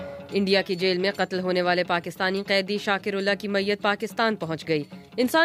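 No technical faults are audible.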